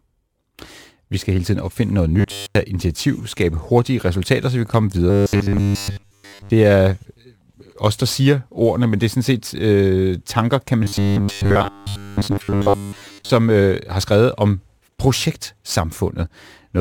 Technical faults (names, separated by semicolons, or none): robotic sound from repeated short buffers